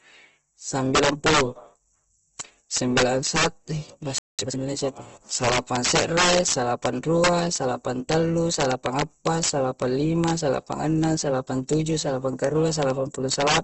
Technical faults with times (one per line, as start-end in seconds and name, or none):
0.00-13.63 integer overflow
0.00-13.63 Opus compression
4.18-4.39 playback stall
4.39-4.59 time-compressed catch-up